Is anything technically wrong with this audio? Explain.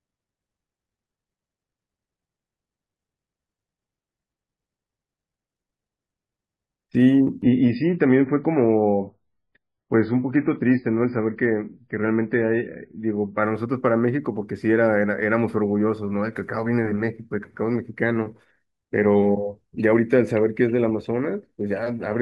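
Yes. From 7.42 to 13.42 s there's an adaptive stream at a lower bitrate. The connection sagged, nothing above 5.1 kHz survives, and the speech turns swirly, which fits a very low-bitrate MP3 rendition.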